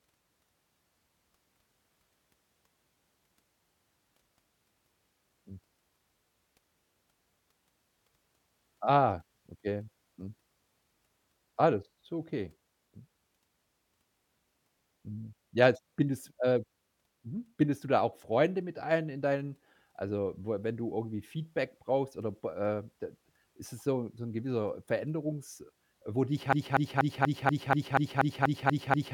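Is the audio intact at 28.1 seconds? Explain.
No. A broken-record loop runs from 26.53 s to the end, after "wo dich": a 0.24 s piece repeats eleven times, likely from a stalled player resending it.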